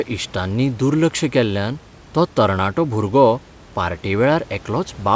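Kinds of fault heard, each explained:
No faults can be heard.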